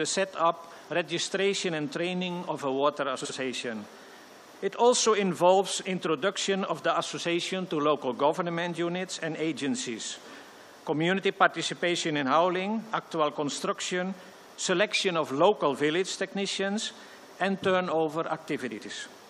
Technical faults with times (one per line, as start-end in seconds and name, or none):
3.20-3.30 frames out of order
18.71-18.86 frames out of order